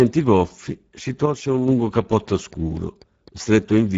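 It's a short speech clip with clearly audible Speex codec damage all the way through. The voice has that hoarse, grainy CELP texture you get when the excitation is starved of bits, and the damage points to a low-to-middle setting of roughly 10 kbps. There's nothing above 7.7 kHz, so the top band is just the codec's narrow wideband range. What sits near that ceiling is a shaped noise-like fill rather than real detail. Then there's a sudden gain jump from 1.26 s to 1.68 s: the level, background included, drops by about 6 dB in one step at the start and snaps back at the end. That's most likely a digital gain change applied without any ramp, which is why the edges are abrupt rather than a smooth fade.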